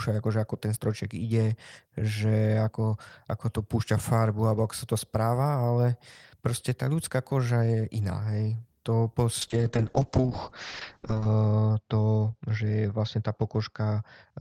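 A call bitrate drop hits this speech clip from 9.42 s to the end: the encoder falls from 32 kbps to 7 kbps, coding coarsely and narrowing the band from 20 kHz to 8 kHz, so the speech turns muffled and watery, bottoming out for 1.84 s.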